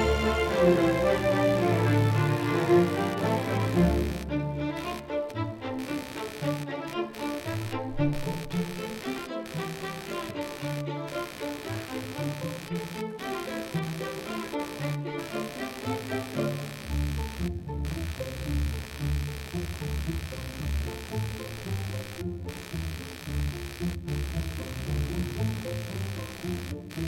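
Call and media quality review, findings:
Computer activity noise throughout: buzzy chirping pulsing near 70 Hz, roughly 15 dB under signal; load swings disturbing shared audio ground. Follows machine activity, not the sound, unlike steady mains hum.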